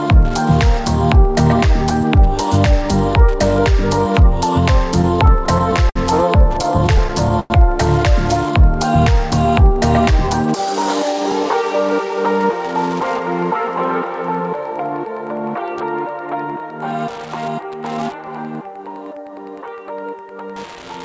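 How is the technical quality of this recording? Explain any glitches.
The recording has three kinds of fault: a constant ticking interference, two stretches of stutter, and one hurried passage. Its band ends at 8 kHz, which points to a wideband call codec such as G.722.

Wi-Fi interference runs through the whole clip. A nearby Wi-Fi radio sends a beacon every 102.4 ms. The audio circuit picks it up and rectifies it. The result is a steady tick about ten times a second. It sits roughly 30 dB below the audio. It is faint but constant, and easiest to hear in quiet moments.

Repeated stalls (stutter) occur from 5.02 to 5.97 s and again from 6.53 to 7.52 s. Packets arrived late, so the jitter buffer kept running dry. Each time, the receiver stretched the last sound until new audio came. The first span has eight stalls, totalling 135 ms, and the longest is 60 ms. The second has nine, totalling 177 ms, and the longest is 102 ms. 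Nothing is lost, but the sound drags and catches.

A jitter buffer speed-up follows from 9.70 to 11.63 s. Too much audio had built up in the buffer. To reduce the delay, the receiver cut many short pieces, about 150 ms in total. Playback runs at 106 percent for that stretch. The pitch stays the same, but the passage sounds slightly rushed.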